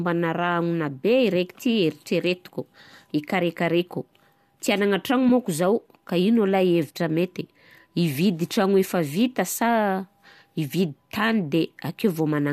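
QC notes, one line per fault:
5.29 s, AAC frame loss with concealment: a very brief smeared, slightly noisy blip about 10 ms long, which fits a single dropped frame. The decoder bridged the gap by reusing the last good spectrum rather than dropping to silence, so there's no click or hole, just a tiny patch of fuzz where the harmonics blur. The 10 ms span points to low-delay AAC, likely AAC-ELD, with its light coding grain audible underneath.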